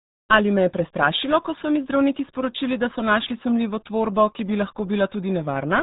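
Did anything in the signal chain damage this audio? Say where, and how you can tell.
Yes, at the codec stage, across the whole clip. The speech is muffled and gargly from start to finish, with no content above about 3.8 kHz, and the heavy smearing sounds like the RealAudio 14.4 codec (RealAudio 1). At a rate that points to roughly 8 kbit/s, the encoder keeps only a coarse model of the narrowed band, so the consonants lose their edge and the vowels pick up a watery, bubbling texture.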